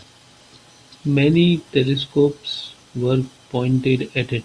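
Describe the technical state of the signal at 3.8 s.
At 3.8 s the speech signal is intact, with no audible dropout, distortion, glitch or other technical fault at that point.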